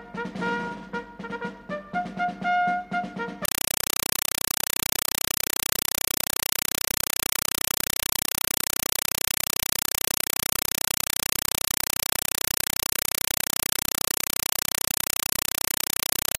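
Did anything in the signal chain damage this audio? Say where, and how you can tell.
Yes. From 3.45 s to the end, the sound is replaced by chattering static, the signature of a compressed stream played as audio at the playback stage. An AC-3 (Dolby Digital) bitstream on the S/PDIF or HDMI output was treated as ordinary PCM samples rather than decoded. Each coded frame comes through as a 5.33 ms burst of noise followed by zero padding, repeating at 31.25 Hz, which produces the chatter. The data density fits a stream of about 256 kbps.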